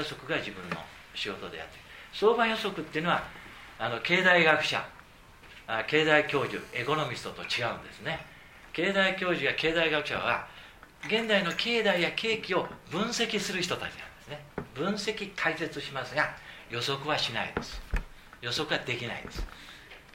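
From 6.28 to 7.08 s a GSM phone buzz sits under the sound: a hard, raspy tone at about 217 Hz, rich in harmonics and unrelated to the material, at about 24 dB below the signal. A nearby 2G handset transmitting in bursts at that rate induced radio pulses that the audio circuitry rectified into an audible buzz. It holds steady for its whole length, which points to a handset in a call rather than a data transfer.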